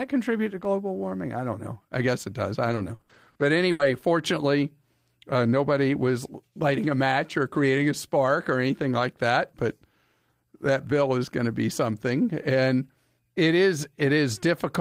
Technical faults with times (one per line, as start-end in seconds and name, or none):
0.65 block of digital silence
2.67-3.95 repeated packet loss (robotic sound)